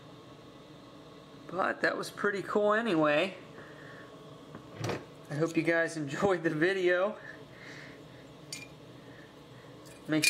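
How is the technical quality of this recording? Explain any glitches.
The recording's technical quality shows no glitches to explain.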